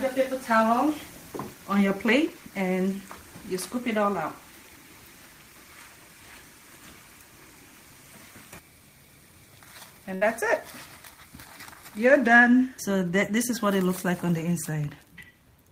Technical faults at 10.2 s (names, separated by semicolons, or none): burst of packet loss